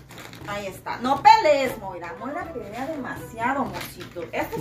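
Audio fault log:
No audible faults are present anywhere in this clip.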